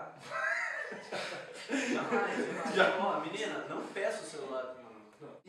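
No audible technical faults anywhere in this audio.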